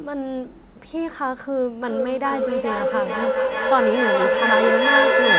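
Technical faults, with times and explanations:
1.82–5.39 s, feedback echo between two devices: two devices in the same room are on the call, and each plays back what the other's microphone captured. That microphone picks the sound up again, and neither echo canceller removes the other device's output. The speech returns roughly every 0.4 s, each pass thinner and more ringing within the 4 kHz band the call path carries. The loop is loud enough that the repeats pile up instead of fading, peaking about 6 dB above the speech.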